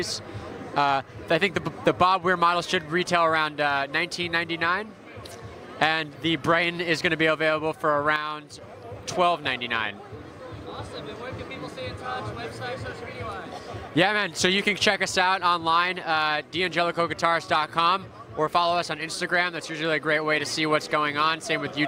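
At 8.16 s a sudden gain jump cuts everything, noise floor included, about 7 dB in one step, not a fade, until 8.61 s, likely an unramped setting.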